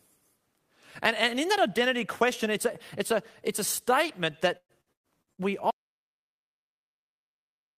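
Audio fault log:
4.57–5.41 s: repeated packet loss (robotic sound), just after "a it's a statement". Five holes, the longest 117 ms, are patched by stretching the preceding sound, so nearly half the span is synthetic fill. That gives a choppy texture with fragments missing.
5.71 s to end: audio dropout to silence. The signal cuts out mid-flow and stays silent, with no room tone, through the end of the clip. This is likely a lost input link or device, with the recorder continuing to write silence.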